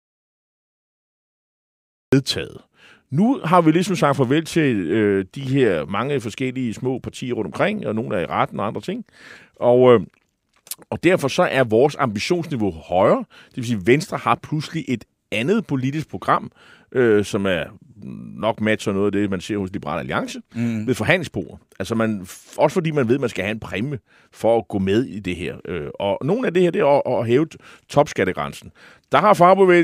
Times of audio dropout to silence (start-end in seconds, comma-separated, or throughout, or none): 0.00-2.12